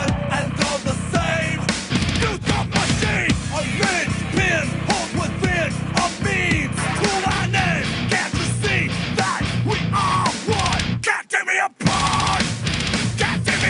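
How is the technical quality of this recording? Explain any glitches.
No glitches or technical faults can be heard here.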